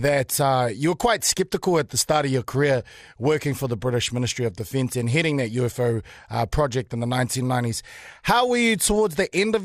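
From start to end, the speech carries MP2 compression, likely at 80 kbps: upper sub-bands flicker off, leaving dull, gurgling grain and a ragged, gappy high-frequency band on a spectrogram. At 6.05 to 6.18 s, DAB burbling: a small bit error rate corrupts samples across about nine frames, giving short blips of noise in single sub-bands, seen as isolated band-shaped bursts.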